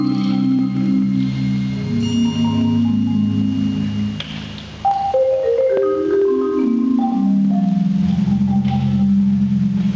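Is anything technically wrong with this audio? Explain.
Yes. The audio has gain pumping, and it runs through the whole clip. The level breathes constantly, with a swing of around 10 dB. The likely cause is an input gain set far too high, with a fast limiter or compressor pulling it back on each peak. Loud and soft parts sit close together, so the sound feels squashed. The call path is audible too: nothing reaches above 8 kHz, which fits a wideband call codec such as G.722.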